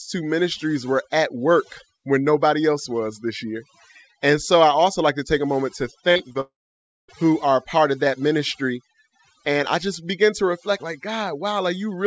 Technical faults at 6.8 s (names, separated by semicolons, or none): overdone noise removal; long network dropout